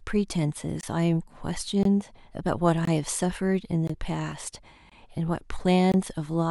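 Short, hard-edged holes of about 21 ms interrupt the speech once a second, at 0.81, 1.83, 2.85, 3.87, 4.90 and 5.92 s. This is a gap between chunks: silence is inserted at each join between 1 s chunks.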